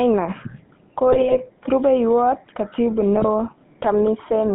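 GSM full-rate codec, from start to end: the speech passes through the original GSM coder, which models the vocal tract as a filter and excites it with a sparse, regularly spaced pulse train, discarding much of the fine excitation detail. The result is a steady buzzy, gravelly grain on every syllable, plainly audible, and a narrow line band of roughly 150 Hz to 3.5 kHz, which fits the 13 kbps full-rate channel.

GSM bit errors, 1.12 to 1.41 s and 3.16 to 3.25 s: corrupted bits reach the decoder, so the filter, pitch and gain parameters it rebuilds are wrong for several consecutive frames. The spectrum lurches and the level jumps, and the speech breaks into squawks, pops and gargling. The first burst lasts nearly 0.3 s and points to about fourteen damaged frames. The second is shorter, about 0.09 s, with fewer frames hit but a harsher error rate.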